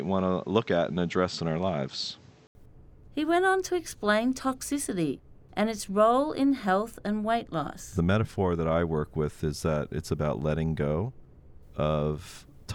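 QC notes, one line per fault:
0.00–2.55 s, input switched to a poorer device: the speech opens dull and boxy, with nothing above 8 kHz and a faint extra background noise sitting around 35 dB below the speech. An 80 ms gap follows at 2.55 s, and then the sound opens out to full bandwidth with no noticeable jump in level. The likely cause is a recording that began on a narrower-band microphone or headset call profile before the system changed inputs, with the short dropout marking the handover.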